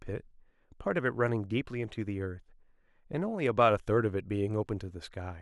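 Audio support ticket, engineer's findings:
Listened to the whole speech clip and nothing stood out as a fault, so no findings to log on this one.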